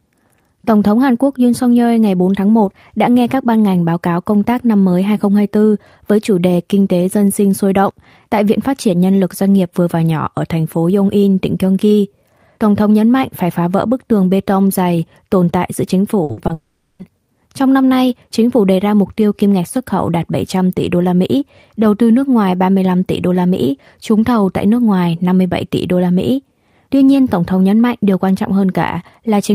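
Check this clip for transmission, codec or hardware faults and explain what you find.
There's a cluster of network trouble in the speech, all packed between about 16.2 and 17.0 s, right after "tồn tại giữa chính".

Two back-to-back bursts of packet loss hit at 16.23 to 16.31 s and 16.31 to 16.39 s. Each time about 60 ms was lost, and the receiver stretched the last sound into a fading buzz or hiss.

A short concealed packet loss follows at 16.47 to 16.51 s. About 20 ms went missing and was patched from the preceding audio, leaving a quick smear or wobble.

Then the sound fades out from 16.53 s and stays silent for roughly a quarter second before speech resumes at 17.01 s, with about 460 ms gone. That's likely a long network dropout, with the receiver's fill giving up into silence.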